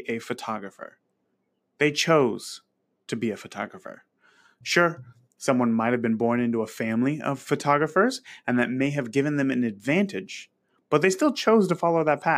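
Nothing stood out on listening to the speech in this recording.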